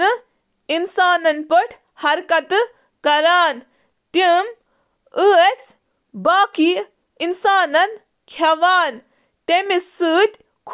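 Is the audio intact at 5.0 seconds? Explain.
Yes, at 5.0 seconds the audio is intact, with no dropout, click, distortion or other fault to be heard at that moment.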